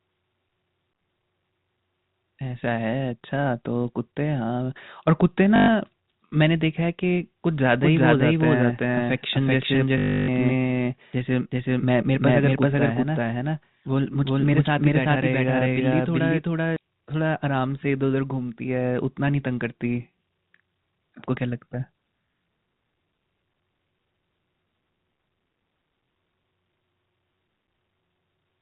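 From 5.56 to 5.68 s, packet loss with last packet repeated replaces 120 ms with a buzzing robotic stutter, consistent with 20 ms packets, rather than a silent gap. From 7.82 to 16.76 s a doubled audio track runs a copy about as loud, roughly 0.4 s behind. It has no decay or room colour, unlike an echo, and is likely from a second capture path. A 300 ms repeated-packet stutter follows, 9.98 to 10.28 s.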